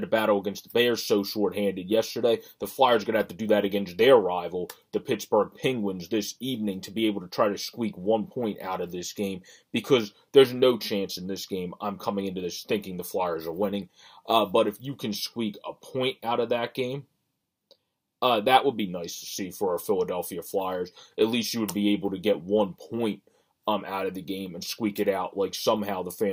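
No technical faults are audible anywhere in the recording.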